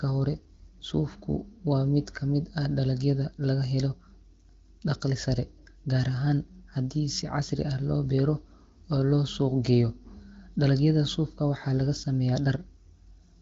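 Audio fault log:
Nothing stood out on listening.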